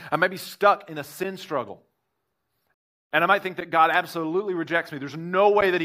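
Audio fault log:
2.74–3.11 s, rebuffering stall: the speech cuts abruptly to silence for about a third of a second, then resumes exactly where it stopped, with nothing skipped. The player ran out of downloaded audio and waited for more data, adding 364 ms to playback.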